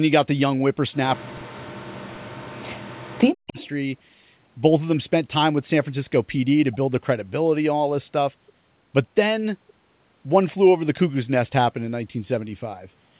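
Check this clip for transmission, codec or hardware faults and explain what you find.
Two faults, both in the first few seconds. From 1.18 to 3.58 s the speech is suppressed in double talk: it dips, by roughly 40 dB at worst, for about two seconds in total. The likely cause is the echo canceller turning down the near talker along with the far side's echo.

Then an echo leak from 3.48 to 3.68 s: a faint copy trails 140 ms behind, about 20 dB under the speech. That's probably residual loudspeaker echo slipping past the canceller.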